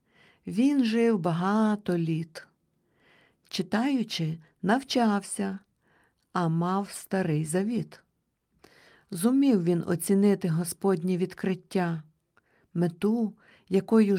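Nothing in this speech recording stood out as a technical problem on listening.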